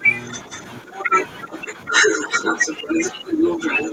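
Speech suppressed in double talk at 0.00 to 0.06 s: the speech dips by about 10 dB, likely because the echo canceller mistook simultaneous talk for echo and turned everything down. Other side's voice leaking through from 0.23 to 0.62 s: a second voice sits about 15 dB below the speech, likely loudspeaker playback the echo canceller failed to remove. Suppression returns at 0.83 to 1.13 s, a shallower dip of about 5 dB. From 0.95 s to the end, the leaked voice rises to about the same level as the speech. The speech then drops by about 10 dB again at 1.46 to 1.90 s, and from 2.52 s to the end.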